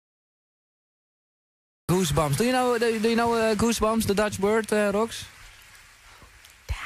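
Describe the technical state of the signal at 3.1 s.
Nothing is wrong with the signal at 3.1 s; at that moment it plays through intact, with no dropout, distortion, glitch or other disturbance to be heard.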